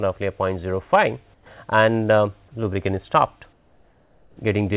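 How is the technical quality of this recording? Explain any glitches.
The recording has a narrowband call character, with nothing above 4 kHz, which fits a G.711 call path, and the background changes character twice. From 1.34 to 1.46 s and from 3.53 to 4.37 s, the real background becomes flat, featureless hiss, about 8 dB and 5 dB quieter. This is likely comfort noise in place of the background, synthesised by the receiver while the sender paused transmission.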